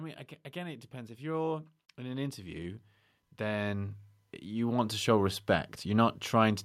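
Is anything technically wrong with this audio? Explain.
Yes. Automatic gain rising from 0.53 to 5.8 s: the gain control treats the input as too quiet and lifts it about 16 dB, so speech and background swell together.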